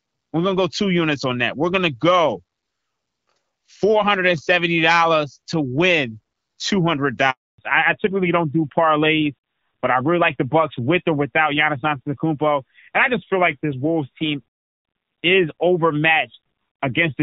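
At 7.30 s a handover gap cuts the speech for 280 ms, until 7.58 s. The call switched networks and no speech frames arrived during the changeover, so the sound drops away almost instantly and stays silent, losing whatever was said in between.

From 7.58 s to the end, the call falls back to narrowband. Before the gap, the HD Voice wideband coding carries clear, full-bodied speech consistent with a mid-rate AMR-WB mode. Afterwards nothing remains above 4 kHz, and the speech sounds duller and rougher, which fits a low-rate AMR-NB mode around 7.4 kbit/s.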